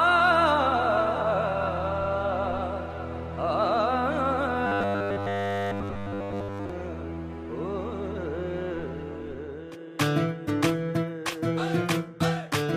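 From 4.67 to 6.70 s, new audio likely stopped arriving in time, and the software filled the gap by looping the same 10 ms buffer throughout. This produces robotic sound from repeated short buffers: a rigid, metallic 100 Hz buzz that follows the real sound only roughly.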